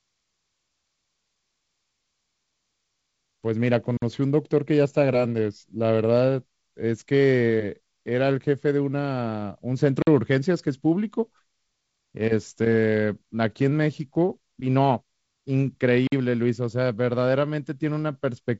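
Speech, carried through G.722 wideband telephone coding with nothing above about 7 kHz. From 2.95 to 3.76 s there is a block size mismatch (truncated). A steady buzz at 43.1 Hz sits under the sound. The buzz marks each block boundary, which fits blocks of 1024 samples. One stage writes blocks longer than the next stage reads. The tail of each block is discarded, so the sound jumps at every join. The pace does not change here. Separately, there are gaps between chunks at 3.97, 10.02 and 16.07 s. Each is a hole of 50 ms. They recur every 6 s, the length of each chunk. Silence has been placed between consecutive chunks, likely from padding or a player starting each chunk late. Nothing is removed, but the sound breaks at each join.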